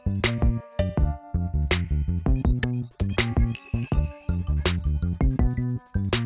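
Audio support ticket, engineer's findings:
No faults found on listening; nothing to attribute to any component. No issue to escalate from this clip.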